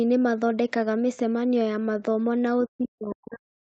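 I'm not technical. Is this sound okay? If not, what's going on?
No. Speech suppressed in double talk starts at 2.67 s and runs to the end: the voice drops sharply, nearly disappearing at its deepest point. This likely happened because both sides of the call were talking at once. The call's echo canceller, which removes the other person's voice coming back through the loudspeaker, couldn't tell that echo apart from this talker, so it turned everything down together.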